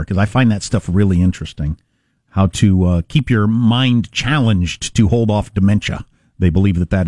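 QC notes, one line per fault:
No technical faults can be heard in the speech, and the signal keeps a steady, continuous path from beginning to end.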